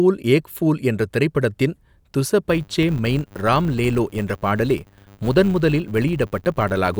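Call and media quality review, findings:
Filter restarted on every block: steady 100 Hz buzz from 2.5 s to end of clip, tracking speech level. Probable component: processing filter losing its state at block boundaries. Each block restarts from zero, leaving a small transient. Repeat rate fits 10 ms blocks.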